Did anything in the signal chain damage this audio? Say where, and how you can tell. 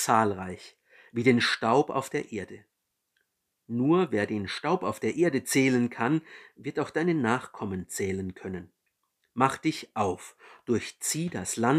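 No, nothing audible points to damage anywhere in the signal chain; the speech holds a steady level and continuous timing with no disturbance at any stage.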